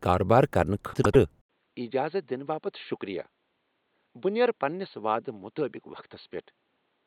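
Speech, with two faults. From 0.94 to 1.16 s, frames out of order swap two neighbouring 96 ms blocks, giving a garbled flutter. At 1.41 s an 80 ms silence comes, and the sound then turns dull and boxy to the end. Nothing is heard above 4.4 kHz, the level drops by about 10 dB, and a new, faint noise floor appears. The likely cause is the input switched to a poorer device.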